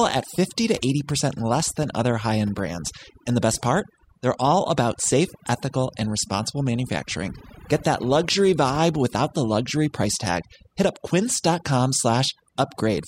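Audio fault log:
Throughout: overdone noise removal. Between phrases the background falls to near silence, scattered with brief twinkling specks where isolated frequency bands slip back above the gate. The quieter components of the speech sit close to the noise estimate and are pulled down along with the hiss. Unlike low-bitrate codec smearing, the damage tracks level rather than time, so quiet speech and pauses suffer most while louder syllables stay comparatively intact.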